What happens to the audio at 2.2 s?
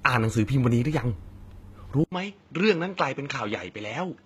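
An input switched to a poorer device from 2.04 s to the end at 4.25 s: after an 80 ms silence, the band stops at 7.5 kHz, the level drops by about 5 dB and new background noise sits roughly 35 dB below the signal, likely a change to a different microphone or headset profile. HE-AAC compression also runs throughout, with plainly audible damage and nothing above 14.9 kHz, likely because the treble is rebuilt from copied lower bands, leaving its harmonics misaligned.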